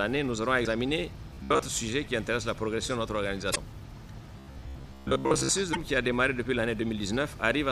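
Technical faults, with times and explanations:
0.62–0.67 s, 3.52–3.57 s and 5.71–5.77 s: damaged data in a compressed stream. Each is a brief chirp, squawk, click or short hole lasting about 55 ms. Part of the compressed data at these points is corrupt, so the decoder cannot read those frames correctly. It produces garbage or drops them, loses its place in the stream, and then finds the next valid frame header, which is why the disturbance is so short and abrupt.
1.34–1.71 s and 4.39–5.49 s: robotic sound from repeated short buffers. The audio turns into a hard, metallic buzz at a steady 66.7 Hz that only loosely follows the underlying sound. About half of the first stretch and roughly 70% of the longer second stretch are repeated material. The likely cause is audio arriving too slowly, so the playback side keeps replaying the last short chunk. Repeats at 66.7 Hz fit a chunk of about 15 ms, and that fixed cycle imposes the buzzing pitch while the real audio in between is skipped.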